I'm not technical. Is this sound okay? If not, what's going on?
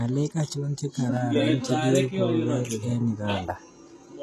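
No. The speech was likely squeezed by HE-AAC compression, which fakes the treble from lower sounds. Throughout, s sounds turn gritty or lispy, with nothing above 12.3 kHz.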